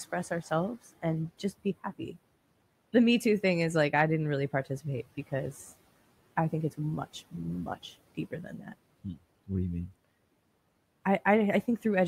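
Right after "think it's much much", from 8.15 to 8.73 s, speech is cut by the noise suppressor. It mistakes quiet speech for background noise. The level drops by up to about 17 dB, for roughly a third of a second. That stretch sounds faint and swallowed.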